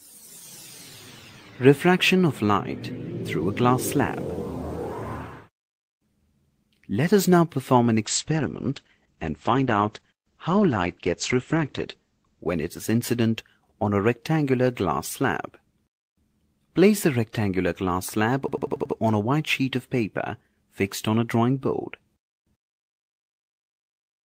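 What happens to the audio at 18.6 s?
That's a system hang loop from 18.48 to 18.95 s: a frozen system replayed one 93 ms buffer (likely 4096 samples) five times, a machine-gun stutter at 10.8 Hz.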